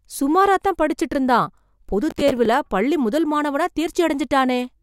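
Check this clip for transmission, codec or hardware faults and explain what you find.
There's one fault here, a processor overload crackle running from about 2.11 to 2.46 s of the speech. For roughly a third of a second the system couldn't fill its small audio buffers in time. The sound points to buffers of around 5 ms, with something like ten of them missed. Each missed slot got stale audio replayed with hard edges, so you hear a gritty, tearing crackle over the speech that clears as soon as the load eases.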